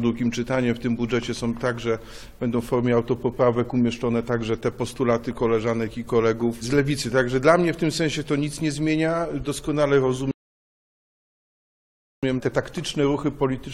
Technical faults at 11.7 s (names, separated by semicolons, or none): rebuffering stall